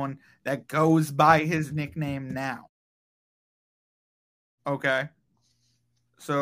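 No technical faults are audible.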